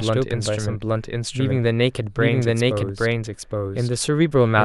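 From the start and for the whole clip, the speech is heard twice: a doubled audio track, with a second full-band copy trailing the first by roughly 0.7 s at about the same loudness. It is likely caused by the same signal reaching the mix a second time through a slower path. It sounds like an exact, dry repeat with no room tail. On a waveform or spectrogram, every syllable's pattern reappears intact, shifted right by that fixed gap.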